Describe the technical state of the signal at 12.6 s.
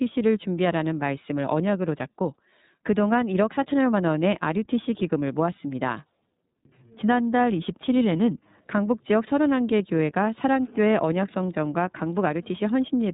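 At 12.6 s, as throughout, the iLBC codec's narrowband coding leaves nothing above 3.8 kHz. Independently coded 30 ms frames give a rough, synthetic edge that a plain low-pass filter would not add.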